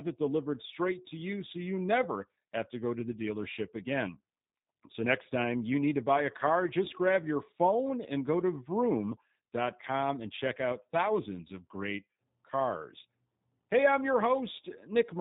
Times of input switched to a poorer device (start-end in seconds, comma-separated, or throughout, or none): none